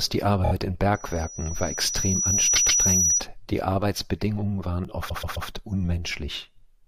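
At 0.43 s, repeated frames cause a stutter. A 26 ms compressed block was sent again and plays three extra times. On the waveform it looks like identical back-to-back slices.

From 0.94 to 3.24 s, a loudspeaker feedback squeal sits at 5.8 kHz. The microphone is picking up its own loudspeaker with loop gain above one, so the tone swells over about a second and a half to roughly 5 dB above the speech. On the spectrogram it is a bright horizontal line.

At 1.95 s, a 3.5 ms block of digital silence replaces the samples with zeros. It shows as a flat gap on the waveform and is heard as a tick.

At 2.55 s, a 131 ms block of repeated frames plays twice more.

At 4.85 s, a 0.5 ms dropout of digital silence gives a single click, seen as a thin vertical stripe on the spectrogram.

At 5.08 s, a 131 ms block repeats three extra times, adding nearly 0.4 s of stutter.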